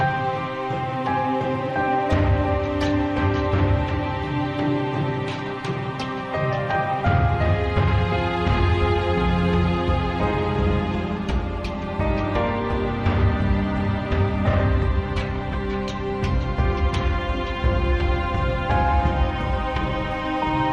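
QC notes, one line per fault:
Nothing stood out on listening.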